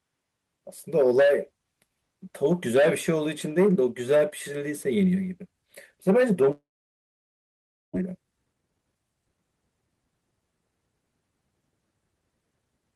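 Long network dropout from 6.51 to 7.97 s in this speech recording: the sound stops arriving, the last bit of audio is stretched into a fading buzz, then roughly 1.3 s of near silence follows, and about 1 s of speech is lost, likely from a network outage. Jitter buffer speed-up from 8.01 to 9.45 s: the built-up backlog of roughly 0.4 s is drained by repeatedly cutting out pieces of one or a few pitch periods, so the speech plays at about 128% speed with unchanged pitch and sounds hurried.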